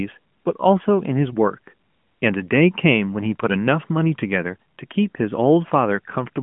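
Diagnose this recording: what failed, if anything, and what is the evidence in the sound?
Nothing has failed: the speech comes through an AMR narrowband mobile codec path at 12.2 kbps, so it sits in a telephone band of about 150 Hz to 3.4 kHz with nothing above 3.5 kHz and only the light coding texture expected at that rate.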